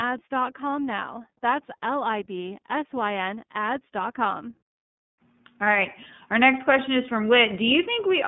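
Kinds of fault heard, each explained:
iLBC codec: narrowband coding of each 30 ms frame independently leaves speech audibly rough and synthetic, with nothing above 3.6 kHz, which fits about 13.3 kbps.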